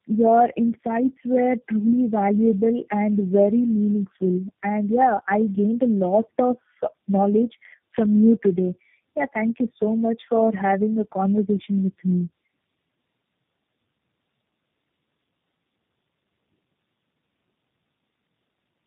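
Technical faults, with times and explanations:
Throughout: tandem speech coding. The speech went through three speech coders in a row, each re-encoding the previous one's already degraded output, so it sounds rough, muffled and warbly. A spectrogram shows nothing above 3.7 kHz and smeared, unsteady harmonics.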